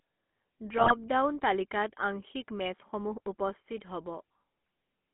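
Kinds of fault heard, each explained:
GSM full-rate codec: Sparse, regularly spaced pulses drive a vocal-tract model, giving the speech a plainly audible buzzy, gravelly roughness throughout. A spectrogram shows energy confined between 200 Hz and 3.4 kHz, with smeared, coarse harmonics, consistent with 13 kbps GSM full rate.
GSM bit errors: From 0.78 to 0.93 s, corrupted bits garble the decoder's filter, pitch and gain values, so the speech briefly squawks and gargles. The spectrogram shows blotchy, distorted frames, which fits roughly six damaged 20 ms frames.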